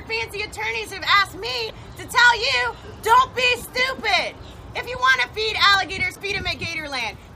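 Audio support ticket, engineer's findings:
Damaged data in a compressed stream. Two short bursts of garbled sound, 1.66 to 1.70 s and 6.13 to 6.17 s, each about 44 ms. Probable component: the compressed file or stream, upstream of the decoder. Mechanism: corrupted bytes in those frames. The decoder misreads them, loses frame sync, then recovers at the next valid header. Both events are the same length.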